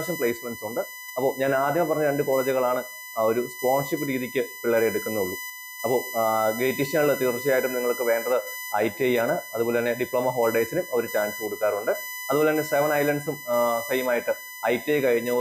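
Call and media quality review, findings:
USB whine throughout: 1 ms USB frame current leaking into the audio supply or ground. Fixed 1 kHz tone, strongest at 2 kHz, roughly 10 dB below the sound.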